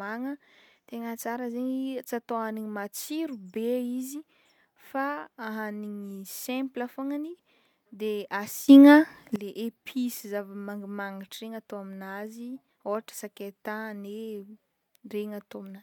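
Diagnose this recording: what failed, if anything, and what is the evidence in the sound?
A sudden gain jump lifts the speech and its background noise together by about 16 dB from 8.68 s to 9.36 s. The waveform envelope steps abruptly at both edges, and the spectrogram brightens evenly across all frequencies. Likely cause: a processing-stage gain change applied without a ramp.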